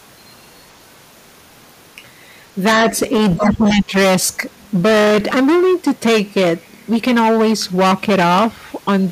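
Hard clipping runs through the whole speech clip. The signal is overdriven by about 16 dB. Roughly a fifth of samples hit the ceiling, giving harsh fuzz on every loud syllable. From 3.36 to 3.94 s, the speech dips by around 10 dB. This is likely speech suppressed in double talk, with the echo canceller ducking the talker.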